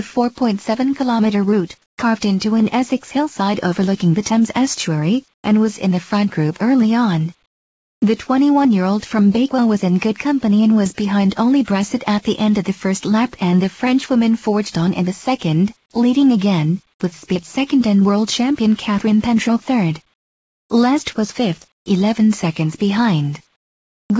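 At 1.82–1.98 s, 5.34–5.44 s, 7.46–8.02 s, 20.14–20.70 s, 21.72–21.86 s and 23.56–24.10 s, comfort noise takes the place of the background. The sender has likely gone quiet during pauses and the receiver filled the gaps with synthetic noise. These pauses last 100 to 560 ms. The faint background, about 50 dB below the loudest passages, turns into a flat, featureless hiss that is about 3 to 19 dB quieter. It is not a dropout, because the gaps never fall to true silence.

The onset is clipped by the voice detector at 5.42–5.44 s and again at 24.07–24.10 s. The detector was likely slow to reopen, so the first 20 ms and 30 ms were lost. The sound starts abruptly, straight out of the comfort noise, instead of fading in. The G.722 call path caps everything at 8 kHz.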